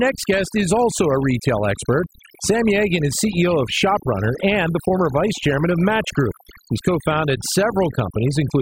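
Speech marred throughout by overdone noise removal: an aggressive noise reducer has pushed individual frequency bands down to nothing whenever they sat near its noise estimate, taking softer parts of the voice with them. The background drops and breaks up into twinkling specks. A spectrogram shows a patchy, holed texture with isolated bright flecks between phrases, where a smooth noise floor would normally lie.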